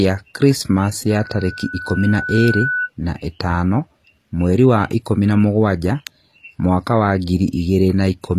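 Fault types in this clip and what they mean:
HE-AAC compression: The treble across the whole clip sounds synthetic, with s sounds turning gritty and lispy and the top end bright but metallic, and nothing is heard above 15 kHz. This likely comes from HE-AAC coding, which fits a low bitrate around 24 kbps. The codec keeps only the lower spectrum and regenerates the highs by copying lower bands upward under a coarse envelope, so the rebuilt harmonics don't line up with the real ones.
loudspeaker feedback squeal: A single steady tone near 1.5 kHz swells up from 1.09 s, takes about a second and a half to reach full strength, sits only about 5 dB below the speech, and stops at 2.90 s, just before "na ĩtano mweri wa". A microphone was picking up the loudspeaker it fed, and at that one frequency the loop gain went above one, so the tone kept feeding on itself.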